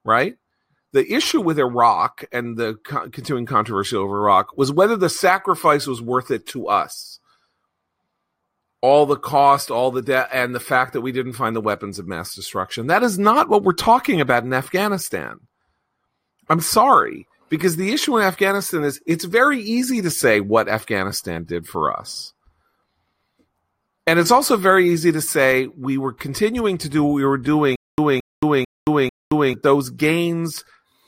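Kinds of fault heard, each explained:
Stutter with silent gaps: right after "do what we were", from about 27.76 to 29.54 s, the speech catches on a short fragment of roughly 221 ms, plays it, then drops into dead digital silence for about 224 ms, repeating four times on an even 445 ms cycle. That steady burst-then-nothing rhythm most likely comes from a stalled player or stream replaying its last chunk on each retry, and whatever should have played during that stretch never comes back.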